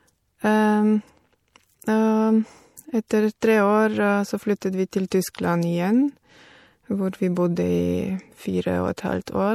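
Across the whole recording the speech carries plainly audible coding damage, most likely from MP3 compression. Nothing is present above 18.8 kHz, where the encoder has cut the treble to save bits, and the damage level fits a 64 kbps encode. With so few bits, weak frequency lines are dropped and reinstated from frame to frame. That gives the sound a watery, swirling texture, with metallic chirping on sibilants and softened attacks.

Pre-echo appears at 3.09, 3.41, 4.61, 5.10 and 8.97 s. At each point a short hiss runs ahead of a sharp onset, spread over 12, 18, 13, 14 and 12 ms respectively. The codec spreads its quantisation noise evenly across a transform block. When an attack lands late in that block, noise sized for the loud part also fills the quiet moment just before it. The onset therefore sounds smeared rather than crisp.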